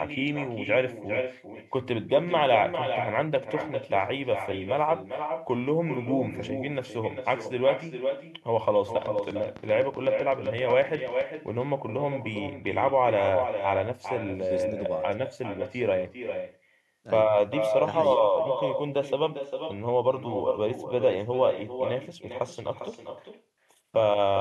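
Echo with no canceller runs through the whole speech clip. Each phrase returns about four tenths of a second later, about 7 dB quieter. It sounds thin. The far end's loudspeaker feeds its microphone, and nothing removes the returning copy.

From 9.06 to 11.22 s, a train of clicks cuts in. Around 20 sharp ticks arrive at a steady 7.89 per second, peaking a few dB above the speech. They sound alike and persist through pauses. Interference or a faulty connection is the likely cause.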